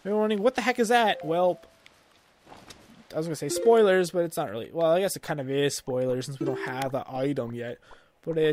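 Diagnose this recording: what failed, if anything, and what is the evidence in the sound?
A single sharp snap at 6.82 s, lasting only a few milliseconds and peaking around -15 dBFS, sits on top of the sound without disturbing it. This is an electrical switching spike in the analogue wiring, likely a nearby switch or static discharge arcing into the audio line.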